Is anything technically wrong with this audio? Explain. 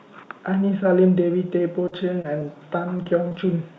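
Yes. There are two kinds of packet-loss fault.

Short concealed packet loss occurs at 1.88 to 1.94 s, 2.22 to 2.26 s and 2.40 to 2.43 s. The receiver extrapolated the preceding sound across 20 to 40 ms holes, leaving brief smears or wobbles.

Repeated packet loss, heard as robotic sound, runs from 2.97 to 3.36 s. Four gaps, the longest 22 ms, were patched in quick succession, so the audio turns choppy with pieces missing.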